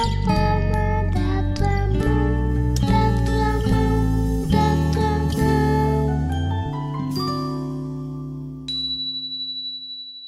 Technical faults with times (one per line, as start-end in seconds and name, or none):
5.96-9.01 mains hum